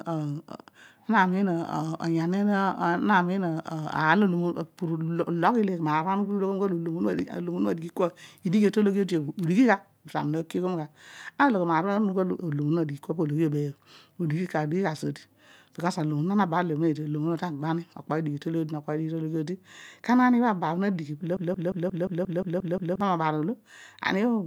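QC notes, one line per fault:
21.37–23.01 s: broken-record loop. A 177 ms fragment of speech repeats nine times back to back, identical on each pass, and the speech belonging to that span never plays. The likely cause is a stalled player or stream resending its last buffered fragment.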